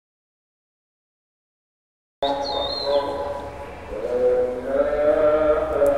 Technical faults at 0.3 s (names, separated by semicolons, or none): audio dropout to silence